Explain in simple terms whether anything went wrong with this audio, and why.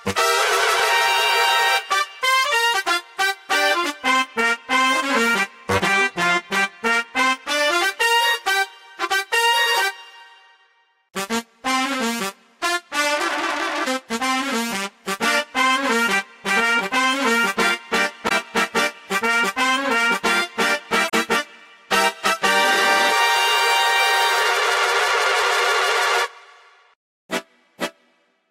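Two brief glitches, at 18.25 to 18.32 s and 21.07 to 21.14 s, come from damaged data in a compressed stream: corrupted bytes made the decoder lose its place for a moment.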